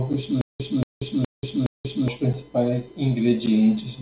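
Speech with a stutter with silent gaps from 0.41 to 2.08 s: a 231 ms fragment plays four times, each followed by 185 ms of dead silence, likely a stalled stream replaying its last buffer. A short stall from a late packet at 3.09 to 3.24 s briefly holds a sound about 15 ms too long as the jitter buffer stretches audio while waiting. Throughout, nothing above 4 kHz comes through, which points to a narrowband call codec such as G.711.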